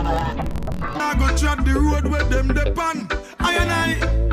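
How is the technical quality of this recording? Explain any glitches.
The recording has one clear fault, confined to the opening second. From 0.0 to 1.0 s it suffers from interleaved audio read as planar. Alternating left and right samples were split so the first half of each block went to one channel and the second half to the other, stretching each half to double length. The sound drops an octave, doubles and chops at about 43 Hz, which fits a 1024-sample block of about 23 ms. Unlike a sample-rate mismatch, the overall pace stays correct.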